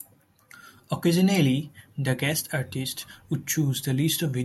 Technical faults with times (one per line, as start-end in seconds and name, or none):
none